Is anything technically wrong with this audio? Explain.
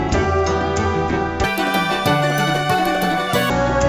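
Yes. From 1.44 s to 3.50 s there is a wrong sample rate fault: the samples are being clocked out at twice the rate they were captured at, with no resampling in between. That fits material recorded at 16 kHz being played back at 32 kHz. Because speed and pitch are tied together here, the sound runs at 2.0 times normal speed and jumps up 12 semitones, a full octave, so it comes across as high and rushed.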